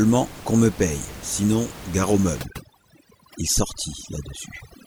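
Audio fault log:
2.42 to 4.86 s, overdone noise removal: from 2.42 s to the end of the clip, the background drops and breaks up into twinkling specks. The noise reducer is acting too hard on the room noise, which before this point sits about 15 dB below the speech. Bands near its noise estimate are pulled far down or off, taking quiet parts of the speech with them.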